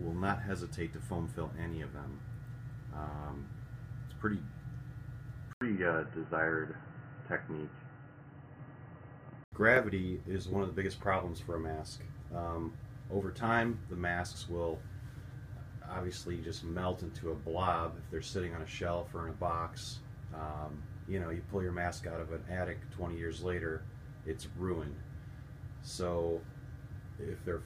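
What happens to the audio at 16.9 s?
Nothing goes wrong at 16.9 s; the audio plays through that moment intact.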